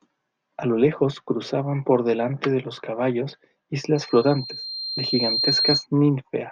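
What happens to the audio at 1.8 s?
Nothing goes wrong at 1.8 s; the audio runs through that moment intact, with no dropout, click or distortion.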